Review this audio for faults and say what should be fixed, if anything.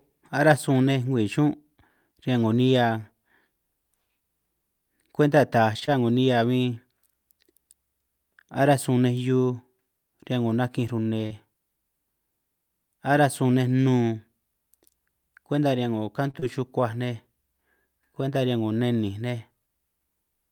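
Short stalls from a late packet occur at 5.79 to 5.84 s and 16.31 to 16.36 s. The jitter buffer ran dry, so the receiver held the last sound for 22 ms and 30 ms until the packet arrived. Nothing is lost, but each stall adds delay and is heard as a briefly prolonged sound.

Short concealed packet loss occurs at 5.86 to 5.89 s, 11.26 to 11.32 s and 16.40 to 16.44 s. About 20 ms, 40 ms and 20 ms of audio never arrived. The decoder filled each gap by extending the preceding sound, which is heard as a brief smear or wobble.

A larger adaptive jitter buffer and forward error correction on a steadier network path would prevent both.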